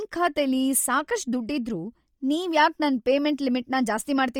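All the way through, the speech has a grainy, breathy edge up top, with the highs smeared into noisy hash and content only up to about 20.2 kHz. That points to heavy, likely Bluetooth LC3 compression, consistent with roughly 32 kbps in 10 ms frames.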